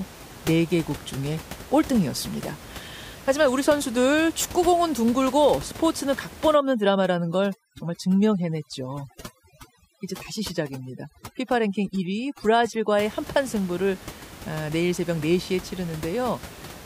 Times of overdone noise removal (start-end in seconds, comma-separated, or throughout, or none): 6.54-13.02